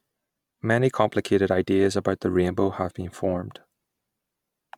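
No audible faults anywhere in the speech recording.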